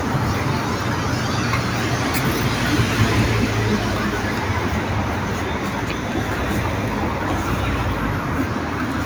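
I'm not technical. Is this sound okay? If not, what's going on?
Yes, nothing wrong turns up anywhere in this recording, so there's nothing to fix.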